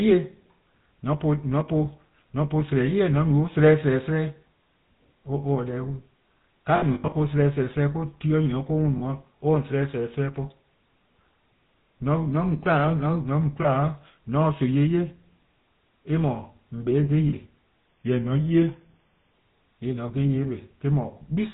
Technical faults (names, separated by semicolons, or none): GSM full-rate codec; lost GSM frames; drift correction step